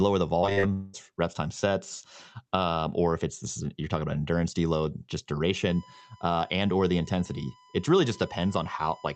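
From 0.41 to 0.65 s, repeated packet loss makes the speech choppy and robotic. Five short gaps, the longest 40 ms, are patched with repeated sound, about 40% of the span.

From 0.73 to 0.95 s, the sound smears into a continued buzz or hiss that fades for about 200 ms before "reps times". A long network dropout is the likely cause.

From 5.69 s to the end, after "about endurance deload just", a steady 1 kHz USB whine sits about 30 dB below the speech. It comes from the bus's 1 ms frame activity leaking into the audio.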